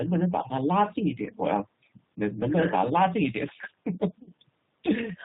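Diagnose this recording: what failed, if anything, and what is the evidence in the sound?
The speech sounds slightly rough and synthetic throughout, with nothing above 4 kHz, which points to the G.729 codec at about 8 kbit/s at the codec stage. It rebuilds each 10 ms frame from a vocal tract filter, a pitch predictor and a few pulses, so the fine detail of the voice is replaced by an approximation.

From 4.23 to 4.32 s the voice stretches into a buzzy tone or coloured noise that fades before recovering. This is VoIP packet loss concealed by the speech codec at the network stage. About 40 ms went missing, which fits four lost frames. The decoder extrapolated from its last pitch and filter while lowering the gain.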